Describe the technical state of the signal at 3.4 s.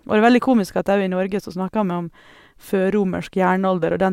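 At 3.4 s the speech signal is intact, with no audible technical fault at that moment.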